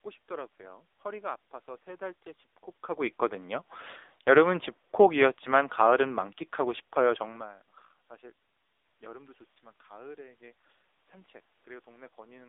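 Throughout the clip the speech has passed through an AMR narrowband mobile codec at one of its lowest modes, consistent with roughly 6.7 kbps. The line passes only about 300 Hz to 3.7 kHz, and nothing above 3.8 kHz survives. With so few bits for each frame's vocal-tract model and pulse excitation, the damage is heavy: the voice turns buzzy and synthetic, and the room noise churns into a swirling warble.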